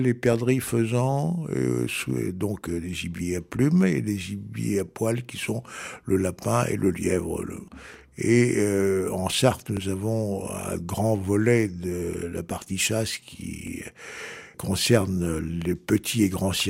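At 3.18 to 3.21 s, 9.77 to 9.80 s and 13.67 to 13.71 s there is a brief Bluetooth stutter: the receiver ran short of data and replayed its last buffer, holding about 21 ms, the length one lost packet would cover. Each is a single quick repeat heard as a tiny hiccup, not a buzz. Unlike a dropout, nothing goes silent, and when the audio resumes it jumps ahead as if it had kept playing.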